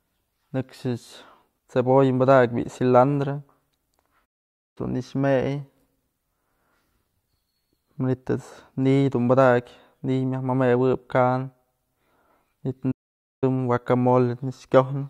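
At 4.25 s and again at 12.91 s the speech cuts to silence for about half a second (0.51 s each), then resumes where it stopped. This is a playback stall, likely the player starving or blocking, and unlike a dropout nothing is skipped.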